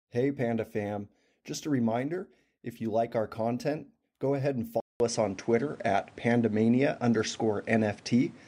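Speech recording: after a 0.2 s gap at 4.80 s, the sound turns duller, loses everything above 10.9 kHz, shifts level and gains new background noise. That is likely an input switched to a poorer device, not a mere filter.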